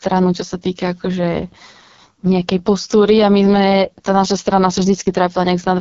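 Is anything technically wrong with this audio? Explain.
Yes. The whole clip has passed through the AMR wideband (HD Voice) codec at one of its lowest rates, and the heavy codec damage fits 6.6 kbit/s. The codec rebuilds speech up to 6.4 kHz from a pulse-driven model of the vocal tract and fills the band from 6.4 to 7 kHz with shaped noise, so nothing remains above about 7.3 kHz. At a rate this low the model is starved of detail, and the speech comes out rough and raspy throughout.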